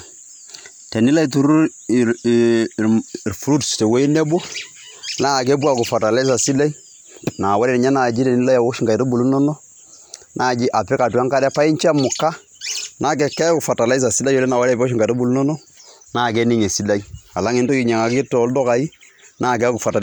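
Listening to this speech recording, nothing technical stood out at any point.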